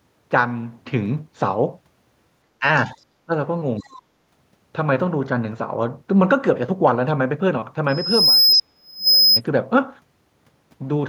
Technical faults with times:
2.60-2.64 speech suppressed in double talk
2.76-2.92 other side's voice leaking through
3.26-3.32 speech suppressed in double talk
3.79-4.01 other side's voice leaking through
3.80-3.86 speech suppressed in double talk
7.88-9.41 loudspeaker feedback squeal
8.51-8.56 other side's voice leaking through
8.54-9.07 speech suppressed in double talk

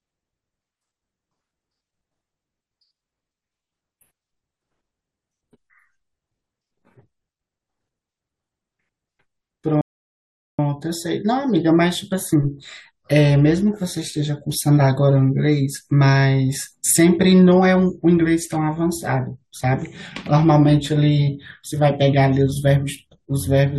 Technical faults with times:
9.81-10.59 rebuffering stall

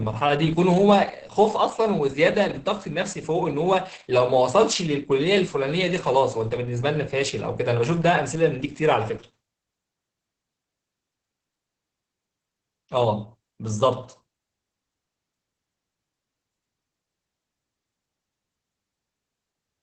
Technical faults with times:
0.00-19.82 Opus voice compression

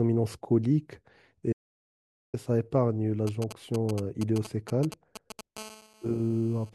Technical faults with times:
1.53-2.34 audio dropout to silence
3.27-5.41 GSM signalling bursts
5.57-6.70 GSM phone buzz

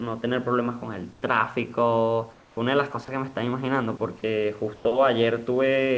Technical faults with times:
1.13-1.22 comfort noise in place of the background
2.33-2.57 comfort noise in place of the background
4.76-4.85 comfort noise in place of the background

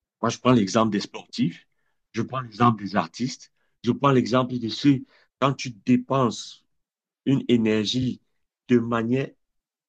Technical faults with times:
8.02-8.06 repeated frames

